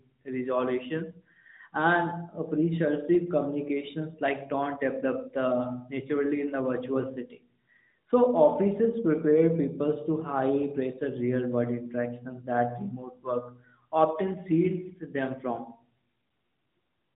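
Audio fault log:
Nothing goes wrong anywhere in this speech; it just carries the usual narrowband mobile-phone sound, with nothing above 4 kHz, as you'd expect from AMR-NB at 12.2 kbps.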